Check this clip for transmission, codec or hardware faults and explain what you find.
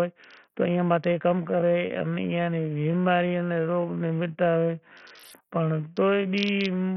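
Two faults stand out in the speech: heavy codec damage throughout, and a time-stretched section from 1.40 s to the end.

Bluetooth SBC compression runs through the whole clip. The treble is thin and flickers. A gritty noise sits on the speech. The likely cause is SBC starved of bits, which fits a low bitrate around 48 kbps. Its upper sub-bands get almost nothing, and the rest are coarsely quantised.

The time-stretched section begins at 1.40 s and lasts to the end. The pace suddenly drops to about 0.61 of normal speed while the pitch stays put. The speech drags. This is likely software stretching that repeats short pieces to fill the extra length.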